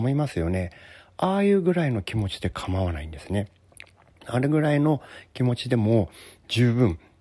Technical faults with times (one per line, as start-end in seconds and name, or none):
none